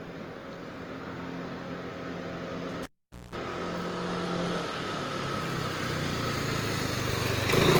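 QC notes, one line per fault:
throughout, generation loss: The sound has a swirling, hollow, smeared quality, with transients blurred and soft, more degraded than a single Opus pass at 48 kbit/s would leave. The likely cause is around seven successive decode and re-encode cycles. Each pass requantises on a shifted frame grid, so noise and spectral gaps pile up. Unlike plain low-bitrate coding, the damage is cumulative and diffuse, and the band still extends to about 20.2 kHz.
2.83–3.36 s, cable pulled and plugged in: A pop opens a dropout of about 474 ms where the signal falls to near silence. Partway through, a roughly 210 ms burst of 60 Hz mains buzz appears as the plug tip makes contact before seating fully. A second pop then brings the sound back. The buzz and the pair of pops distinguish this from a digital dropout, which would cut out cleanly without hum or contact clicks.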